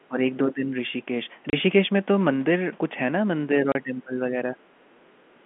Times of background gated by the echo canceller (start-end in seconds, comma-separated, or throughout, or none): 5.36-5.46